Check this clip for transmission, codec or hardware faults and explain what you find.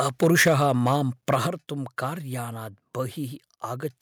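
The clip has two kinds of hardware-side fault, each occurring twice: microphone overload and microphone volume stepped down.

Microphone overload runs from 0.0 to 0.9 s and again from 1.30 to 1.36 s. The peaks push past the converter's ceiling, by about 6 dB in the first stretch and about 2 dB in the second, so their tops are flattened. Only a small fraction of samples is cut off in the first stretch and a few percent in the second, which gives the loudest syllables a harsh, crackly edge. The likely cause is an input level set too high at the microphone. Codec distortion smears and warbles evenly across the sound. This crackle instead tracks the peaks alone.

Microphone volume stepped down happens at 0.48 s and again at 1.47 s, the first in the middle of the opening stretch of overloaded peaks and the second shortly after the next one. The speech and the background together drop in level in a single step, by about 4 dB the first time and about 6 dB the second. 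This is likely the call software reacting to the clipping by lowering the device's input gain. The change is instant and lasting, which sets it apart from a smooth automatic-gain fade or a brief dropout.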